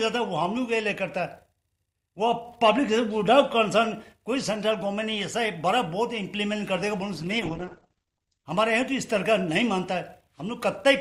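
From 7.14 s to 8.53 s there is a call bitrate drop. The sound loses its top end, with the bandwidth narrowing from 20 kHz to 8 kHz, and takes on a rough, watery texture for about 1.3 s before clearing. That fits the encoder being pushed from around 48 kbps down to roughly 10 kbps. Unlike packet loss, nothing drops out or repeats. Unlike a plain low-pass filter, the coarse coding grit arrives together with the muffling.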